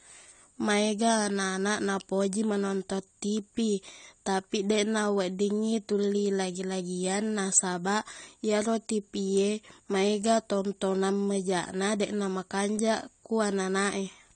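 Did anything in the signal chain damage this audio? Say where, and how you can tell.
Yes. The codec stage did it, likely AAC compression, and the sound fits AAC-LC at about 32 kbps. Throughout the speech nothing survives above 9 kHz, and coarse quantisation of the remaining frequency lines leaves the sound plainly dull, smeared and fizzy.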